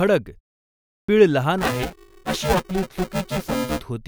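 At 0.79 s, after a 0.47 s pause, a clipped start after a pause cuts about 0.29 s of speech: the output device was still waking, so the sound begins abruptly. From 1.58 to 3.81 s, buffer tearing adds a steady robotic buzz at 375 Hz, which fits a 128-sample buffer; roughly half of each period replays audio about 10 ms old.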